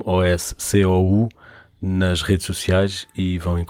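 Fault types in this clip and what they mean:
No technical faults are present in this speech recording. Nothing in it points to a problem with the recording or transmission chain.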